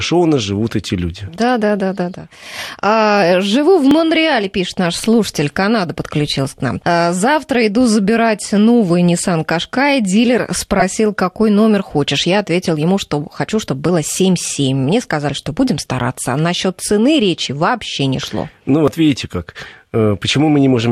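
Audio missing between chunks at 3.91 s and 8.90 s: the speech skips abruptly, losing roughly 10 ms with no silence bridging the join. This is likely a recorder or processor working in 5 s chunks and dropping a sliver at each handover.

A corrupt frame decoded at 10.79 to 10.82 s produces a short glitch. Damaged bits in a couple of compressed frames were decoded anyway, placing energy at wrong frequencies for that span.

The same chunk-boundary skips return at 13.89 s and 18.88 s, keeping the steady 5 s spacing, each a brief jump in the speech where a tiny piece is missing.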